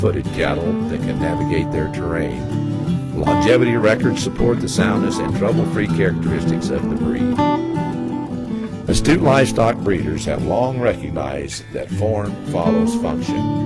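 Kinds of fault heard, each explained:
No fault can be heard in the audio: the signal stays steady and intact, with no dropouts, distortion, added noise or timing disturbances.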